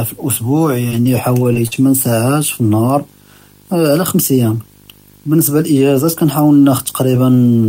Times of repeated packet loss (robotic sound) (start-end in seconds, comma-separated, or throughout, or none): 0.89-1.73